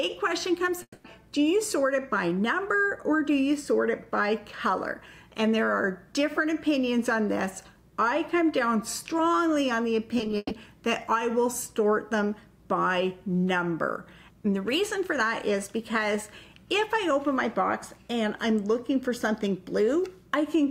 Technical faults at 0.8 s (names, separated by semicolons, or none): long network dropout